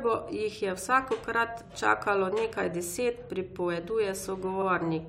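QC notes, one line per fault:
1.66–1.68 s, repeated frames: A block of compressed audio was delivered twice, so the decoder plays the same 23.2 ms again between "je vsakokrat" and "čakalo nekaj deset". The length fits one frame. The speech catches in a brief stutter.
4.61–4.66 s, repeated frames: A longer stretch was duplicated. A 46.4 ms section, which points to two frames, plays twice. The speech runs 46.4 ms longer.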